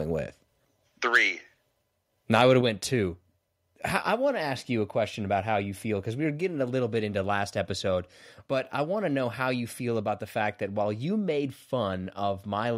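A harsh, crackling edge bites into the loudest peaks of the speech at 1.15 to 1.17 s, and again from 2.33 to 2.42 s just before "would have went two". This is microphone overload: the flattened tops suggest the input level likely drove the converter past its ceiling, by about 3 dB in the first burst and about 2 dB in the second. Roughly a few percent of samples are squared off in the first and a smaller share in the second.

At 2.61 s, between "would have" and "went two", the voice and the background drop together by about 5 dB in a single step and stay at the lower level. That sudden shift points to a microphone volume stepped down, likely by call software reacting to the distorted peaks a moment earlier and cutting the device's input gain at once.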